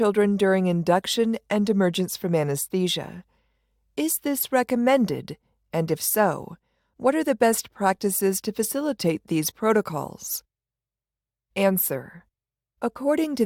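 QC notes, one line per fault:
No faults found in this recording.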